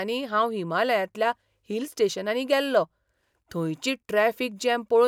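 No technical faults turn up anywhere in this speech recording, so there's nothing to walk through in time order.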